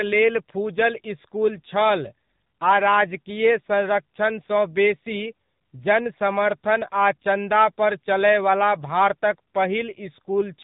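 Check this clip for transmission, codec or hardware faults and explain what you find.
One fault is present: the whole clip has passed through the AMR narrowband mobile codec, and its damage is plainly audible.

Throughout the recording, nothing above 3.8 kHz survives, so the speech sounds boxed-in and telephone-like. AMR-NB samples at 8 kHz and rebuilds each 20 ms frame from a vocal-tract filter excited by a few pulses. The buzzy, synthetic edge on the voice points to a low mode, about 7.4 kbps. That buzz separates it from simple band-limiting, which dulls the sound but leaves it natural.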